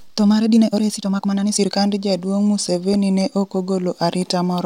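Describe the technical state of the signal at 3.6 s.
At 3.6 s the speech sits inside a run of CD scratch ticks lasting from 2.40 to 3.75 s. A surface blemish corrupts more data per disc rotation than error correction can rebuild, so samples are patched or muted. Six brief ticks result, about four a second, the longest around a millisecond.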